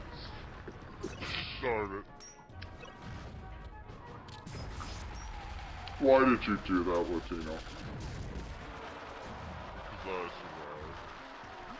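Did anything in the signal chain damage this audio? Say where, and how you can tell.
Yes. At the playback stage the samples are clocked out too slowly, a wrong sample rate fault. Throughout, the sound runs at 0.726 times its proper speed and sits 5.55 semitones low, which fits 22 kHz material played at 16 kHz without conversion.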